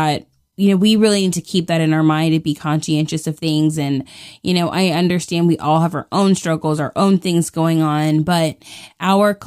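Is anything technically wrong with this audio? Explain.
No, nothing technically wrong turns up anywhere in this recording, so there's nothing here to flag.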